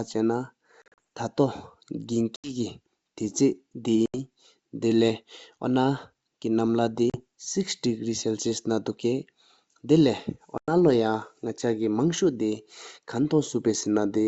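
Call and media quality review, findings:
Packet loss on an ADPCM call, receive path. Speech gated to silence in hard-edged holes: 0.82–0.99 s (about 120 ms lost in scattered gaps across 160 ms, longest 40 ms, roughly seven packets), 2.36–2.53 s (80 ms), 4.06–4.19 s (80 ms), 7.10–7.22 s (40 ms), 10.58–10.73 s (100 ms). Decoder predictor and step size drift from sender's during gaps; on resumption, slight distortion, settling within tens of milliseconds. G.722 wideband path intact, bandwidth to 7 kHz audible.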